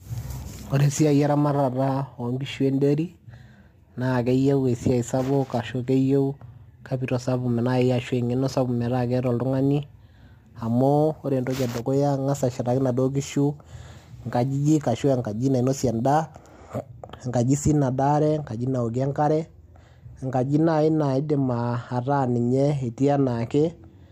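From the start to 16.88 s there's crude rate conversion. Samples are dropped or repeated with no filter, fitting a 48 kHz to 44.1 kHz change, which leaves a gritty, inharmonic fizz roughly 35 dB under the speech.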